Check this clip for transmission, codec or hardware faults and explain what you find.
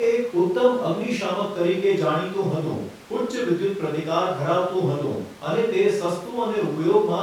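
No faults found.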